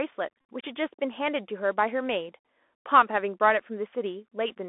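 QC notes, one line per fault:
throughout, Bluetooth CVSD headset codec: one-bit slope coding squeezes the speech into roughly 250 Hz to 3.5 kHz, leaving a hard, empty ceiling near 4 kHz on the spectrogram. A granular hiss fills the gaps, and s sounds turn scratchy.
0.41–0.44 s, Bluetooth headset packet repeated: about 30 ms of lost audio was filled by repeating the last good packet. The waveform shows an identical cell recurring every 3.75 ms, which fits roughly eight short packets, and the spectrogram shows a brief buzz near 267 Hz as evenly spaced harmonic stripes.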